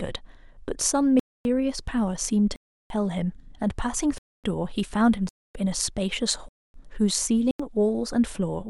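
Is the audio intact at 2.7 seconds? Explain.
No, 2.7 s falls inside a block of digital silence from 2.56 to 2.90 s: about 341 ms zeroed, likely an unfilled buffer, cutting out and back with no fade.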